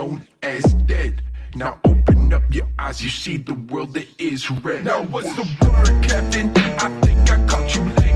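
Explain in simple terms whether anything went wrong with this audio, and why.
Nothing went wrong with this audio, as there are no faults to hear anywhere in it.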